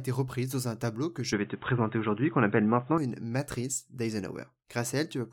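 An input switched to a poorer device runs from 1.33 s to 2.98 s, starting just after "dans un tableau que" and ending right before "une matrice." The speech abruptly turns dull and boxy, with nothing above 3.8 kHz, and a faint new background noise appears, roughly 35 dB below the speech. The level shifts by about 5 dB. The switch happens with no gap of silence. This most likely comes from the system changing to a narrower-band microphone or a headset call profile mid-recording and then switching back.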